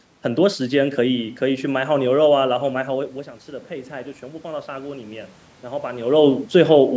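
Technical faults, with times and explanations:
3.68–6.11 s, automatic gain rising: just after the talker drifts back from the mic around 3 s, the input drops by about 13 dB, so the gain control slowly climbs about 5 dB to compensate, and voice and room noise swell up together over those couple of seconds.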